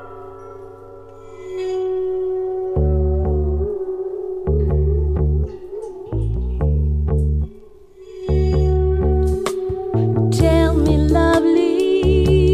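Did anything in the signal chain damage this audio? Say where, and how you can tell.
No, nothing in the signal chain damaged this audio.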